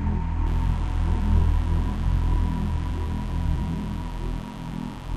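A recording of sounds with a steady, raspy mains buzz from about 0.46 s to the end, harmonics of 50 Hz leaking in, sitting about 20 dB below the sound.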